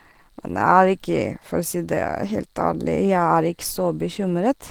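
Across the whole clip, the speech has likely passed through Opus compression at a low bitrate, with the sound pointing to roughly 16 kbps and the encoder running in its hybrid mode. With so few bits, the coder rebuilds much of the upper detail from a coarse model rather than the real signal. The damage is plainly audible: the voice comes across hoarse, grainy and muffled, even though content still reaches about 20.2 kHz.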